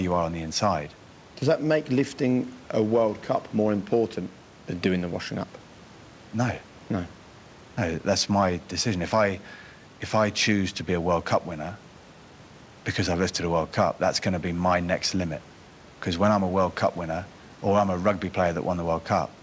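The speech shows no technical faults: a room noise sits about 27 dB below it, and nothing is present above 8 kHz, which fits a wideband call path such as G.722 at 64 kbps.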